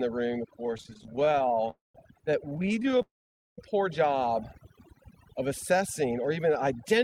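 Overdone noise removal runs through the whole clip. The reducer was set too aggressively, so any frequency band close to its noise estimate is pulled far down or switched off. Quiet parts of the speech are removed along with the noise. Between phrases the background drops and breaks up into twinkling specks, and the speech itself is missing its softer components.

From 0.66 to 1.70 s, right after "room of", there are repeated stalls (stutter). Packets arrived late or more slowly than playback, so the jitter buffer kept running dry. The receiver bridged each break by continuing the last sound, with more than thirty brief fills of up to 19 ms each, about 321 ms in total. That makes up roughly a third of the span. Nothing is lost, but the speech drags and judders.

At 1.70 s a call audio freeze follows and lasts until 1.95 s. The last sound is held as a fading buzz and then goes silent for about 160 ms before the speech resumes where it stopped. 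This adds roughly 241 ms of delay, most likely because packets were held up in transit and the buffer emptied completely.

The stutter returns from 2.49 to 3.01 s, leading into "a poor job". About 164 ms is filled in short bridges of up to 16 ms, again close to a third of the span.

A second call audio freeze runs from 3.02 to 3.59 s. After a brief fade there is about 490 ms of silence, and the total inserted delay is about 557 ms. The likely cause is the same transit hold-up.

From 4.60 to 5.83 s, between "a poor job" and "or even", the jitter buffer slow-down can be heard. To rebuild its reserve, the receiver repeated single pitch periods and small pieces of pause many times over, adding 64 ms. The speech plays at about 95% speed with unchanged pitch, so sounds are slightly drawn out.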